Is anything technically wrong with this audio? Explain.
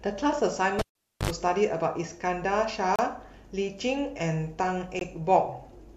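Yes, there are two faults in this speech.

The cable was pulled and plugged back in between 0.79 and 1.30 s. A live lead lost contact, so there is a pop, about 0.41 s of near silence, then about 71 ms of 50 Hz mains buzz as only the tip touches, and a second pop when the sound returns. The buzz and pops mark it as a physical connection fault.

There are also gaps between stream segments at 0.90 s (57 ms), 2.96 s (31 ms) and 4.99 s. Segment timestamps left small holes, and the player filled them with silence. They are clean, hard-edged dropouts with no pop or hum. Their spacing of roughly two seconds fits 2-second segments.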